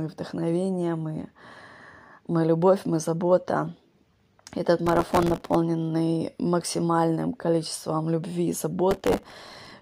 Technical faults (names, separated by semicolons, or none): processor overload crackle